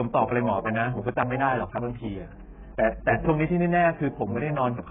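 From the start the speech sounds dull and smeared, with nothing above 3.8 kHz and a watery, fizzy texture on sustained vowels and sibilants. This is likely heavy AAC compression. At a very low bitrate, around 8 kbps, the coder cannot afford the upper spectrum, so it drops the cut-off and quantises the remaining bands so coarsely that holes and substituted noise blur the detail.

From 1.69 s to 4.21 s a faint galloping dit-dit-dit of short buzzes runs underneath, roughly 30 dB below the speech. These are GSM signalling bursts. A nearby 2G phone is exchanging short groups of radio bursts with the network. The audio circuit rectifies that radio energy into an audible signal, which repeats at about 217 Hz and gives the buzz its pitch.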